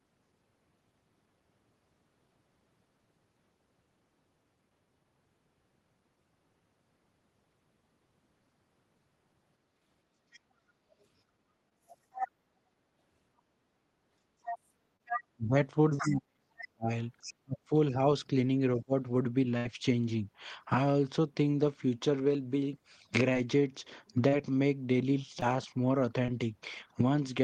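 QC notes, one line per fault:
10.32–12.28 s and 14.44–17.34 s, other side's voice leaking through: a second, far-end voice sits under the main talker, about 5 dB below it in the first stretch and about 10 dB below in the second. This is likely loudspeaker playback that the echo canceller did not fully remove from the microphone. Unlike a packet-loss artefact, it is a separate layer of sound running for seconds rather than a momentary smear in the talker's own voice.
11.69–11.73, 14.97–15.01, 23.33–23.36, 24.28–24.34, 25.40–25.44 and 26.26–26.30 s, short concealed packet loss: each time, a brief slice of the talker's audio failed to arrive and the decoder bridged it by extending the preceding sound, with roughly 12 to 36 ms of fill before blending back. Each one is heard as a tiny smear or wobble. It differs from the burst at 19.6 s because these holes are short enough that nothing audibly fades or buzzes.
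15.36–18.93 s, speech suppressed in double talk: while the far end is talking over the main talker, the talker's own voice dips in pieces, about 1.5 s in total, falling by as much as about 40 dB at its deepest. The likely cause is the echo canceller failing to separate the near voice from the loudspeaker echo and attenuating both. These are level drops tied to the overlap, not filled gaps, which sets them apart from packet loss.
19.57–19.67 s, burst of packet loss: about 80 ms of audio went missing in a row, and the receiver stretched the last sound across roughly 75 ms while turning it down. The result is a held, fading buzz or hiss before the audio resumes further on with that part skipped. Its length and the audible fade distinguish it from the short concealments, which pass as a brief smear or wobble.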